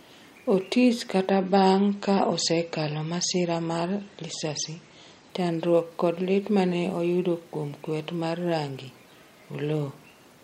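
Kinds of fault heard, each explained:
Adaptive stream at a lower bitrate: the stream dropped to a cheaper version for about four seconds, from 1.30 s to 5.30 s, then jumped back before "chandruok kod lit mane". You hear the speech go dull all at once, with nothing above 8.3 kHz and a swirly, smeared edge from stronger codec artefacts. There's no gap at either switch, just a sudden quality change, and the sound fits MP3 dropping from around 128 to 32 kbit/s.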